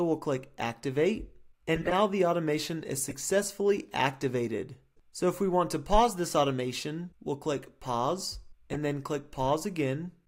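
Corrupt frames decoded at 1.75 to 1.93 s, 3.09 to 3.15 s and 8.73 to 8.76 s: the decoder played frames whose bits had been flipped, so misread gains and codes pushed energy into the wrong frequencies. The first, longest burst spans what sounds like several frames and peaks near about -15 dBFS, heard as a chirp, squeak or burst of noise. The second is a brief, quieter error around about -25 dBFS. The third is a short error of a couple of frames near about -20 dBFS.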